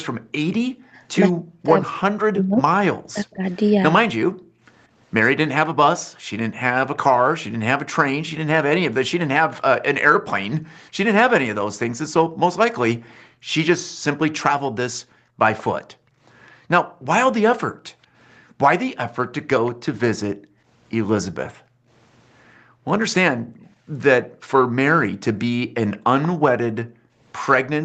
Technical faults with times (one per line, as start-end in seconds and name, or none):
0.12-1.02 background gated by the echo canceller
1.34-3.44 speech suppressed in double talk
4.30-6.30 background gated by the echo canceller
10.60-27.84 background gated by the echo canceller
15.58-15.63 echo leak
19.66-19.71 echo leak
25.97-26.28 echo leak